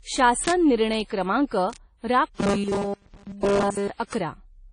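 Speech carrying a dull, band-limited quality throughout. Nothing is present above 9.7 kHz, and two different kinds of codec smearing are heard together, which points to transcoding between lossy codecs, likely a WMA-type encode at around 32 kbit/s re-encoded as AAC-LC. Sharp, broadband bit error spikes sit at 0.48 s, just before "निर्णय क्रमांक", at 1.73 s, just after "निर्णय क्रमांक", and at 4.13 s. Each is a single instantaneous tick unrelated to the speech, unlike a dropout click. From 2.35 to 3.90 s there is likely robotic sound from repeated short buffers: a rigid metallic buzz locked at 200 Hz, consistent with a 5 ms chunk repeated continuously, and its fixed pitch distinguishes it from natural voicing.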